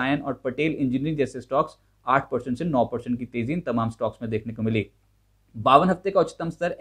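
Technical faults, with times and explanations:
No technical faults can be heard in this recording.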